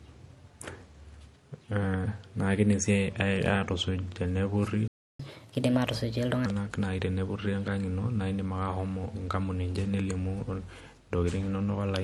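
The speech was likely passed through two lossy codecs in a row, transcoding between lossy codecs, so their artefacts stack. At 4.88 s the player likely ran dry, a playback stall that silences the speech mid-flow for about 0.32 s until 5.20 s. From 5.20 to 6.46 s, catch-up at higher speed resamples the backlog at 1.25 times normal, raising pitch by about four semitones.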